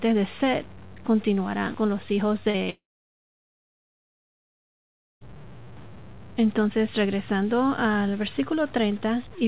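Low bit depth without dither runs through the whole clip: a gritty, signal-following grain about 25 dB below the speech, which points to truncation to roughly 6 bits.

Short concealed packet loss at 2.50 to 2.56 s and 2.64 to 2.68 s, just after "continuarán con los hijos": about 40 ms and then 20 ms of audio went missing. The receiver extended the preceding sound, which smears the audio briefly.

Long network dropout from 2.70 to 5.27 s: the concealment buzz fades quickly and leaves roughly 2.4 s of silence. The sound then resumes without the lost stretch, likely because no packets arrived for about 2.5 s. Throughout, the G.711 A-law call path leaves nothing above 4 kHz.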